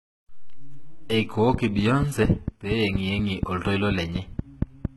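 From the start the treble sounds gritty and lispy, likely HE-AAC compression at a very low bitrate, perhaps around 16 kbps, with the top end rebuilt from copied lower bands. From 1.54 to 4.86 s there's a train of clicks, about fifteen steady ticks at roughly 4.2 per second, sitting some 15 dB above the sound, likely interference or a faulty connection.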